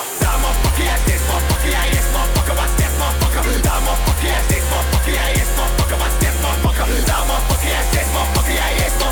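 No dropouts, clicks, distortion, level jumps or other technical faults can be heard anywhere in the recording.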